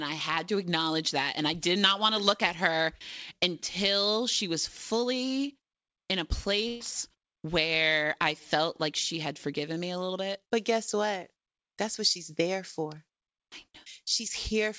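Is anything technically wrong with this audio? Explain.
Yes, there is one fault. At 6.68 to 6.83 s the last sound of the speech is briefly held and fades before the talker resumes, with a short stretch of speech skipped. This is a burst of packet loss: about 120 ms of audio never arrived in time, so the receiver stretched the last received sound across the gap while lowering its level, then continued from later in the speech. The call path's G.722 coding leaves nothing above 8 kHz.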